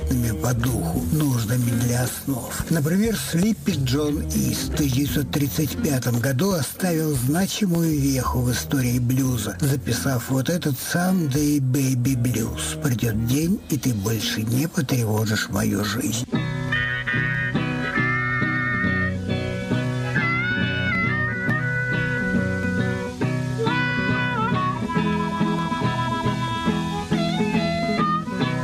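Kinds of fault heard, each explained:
No faults of any kind can be heard here.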